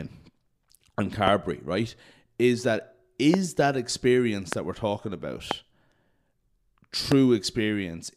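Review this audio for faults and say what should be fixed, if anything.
Loud pops occur at 1.27–1.30, 3.34–3.36, 4.53–4.55, 5.51–5.53 and 7.12–7.14 s. Each is a single sharp click, around 15 to 20 dB above the speech, which continues underneath. They are most likely from brief voltage spikes, such as a loose connector, static or a driver glitch. Securing cables and connectors, grounding the setup, and keeping audio drivers stable should prevent them.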